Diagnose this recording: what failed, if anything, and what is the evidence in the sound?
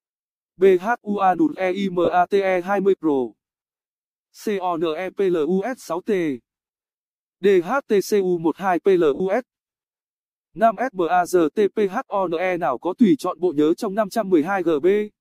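Lost LE Audio frames on the Bluetooth link, concealed by the LC3 decoder. At 2.05–2.08 s (30 ms) and 9.15–9.20 s (50 ms), the sound briefly blurs into a noisy smear. That fits three and five 10 ms frames, each rebuilt from the previous spectrum with randomised signs.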